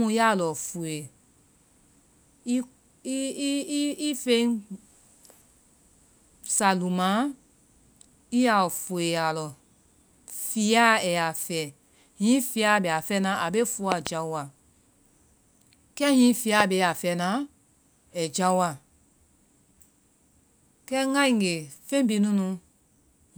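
Loud pops occur at 13.92 to 14.09 s, as two sharp pops in quick succession, and at 16.60 to 16.62 s as a single pop, each about 20 dB above the speech, which carries on beneath. A brief electrical pulse, likely from a switch or static discharge, is the cause.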